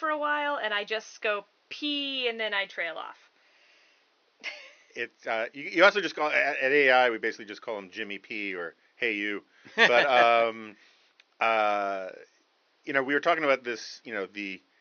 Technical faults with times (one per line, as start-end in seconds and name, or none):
none